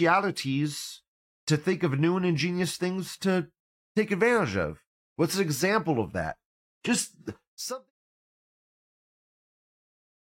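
Nothing stood out on listening to this speech recording.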